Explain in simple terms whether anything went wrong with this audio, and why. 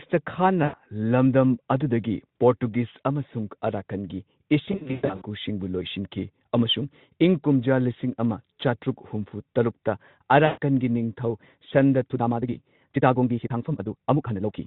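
Two things went wrong. The first is VoIP packet loss concealed by the speech codec. Pieces of the call never arrived. The phone filled the gaps by guessing from the last sound it had. That guess turns into a buzzy, fading tone. It happens from 0.63 to 0.75 s, just before "ꯂꯝꯗꯝ ꯑꯗꯨꯗꯒꯤ". It happens again from 10.45 to 10.58 s, between "ꯑꯃ ꯆꯥꯇ꯭ꯔꯨꯛ ꯍꯨꯝꯐꯨ ꯇꯔꯨꯛꯇ" and "ꯅꯤꯡꯊꯧ ꯁꯟꯗꯥ". The worst patch runs from 4.65 to 5.22 s. There, small dropouts are scattered across about half a second. The longest single gap is 120 ms.

The second is a time-stretched section. From 12.08 s to the end, right after "ꯅꯤꯡꯊꯧ ꯁꯟꯗꯥ", the speech suddenly runs 1.7 times faster. The pitch stays the same, so it sounds choppy and rushed rather than squeaky. The likely cause is software squeezing the audio to fit a set length by cutting out tiny slices. The Speex speech codec carrying the call adds no clear damage of its own.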